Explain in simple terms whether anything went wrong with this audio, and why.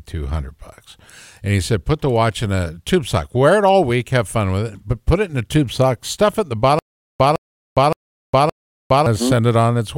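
Just after "stuff it in the", from 6.79 s to 9.06 s, the speech catches on a tiny scrap of sound about 0.16 s long that plays four times. After each scrap comes roughly 0.41 s of total silence, so the pattern repeats every 0.57 s. This is stutter with silent gaps. The likely cause is a stalled player or stream that replayed its last fragment at each retry and then had nothing left to play. The speech meant for that stretch is lost.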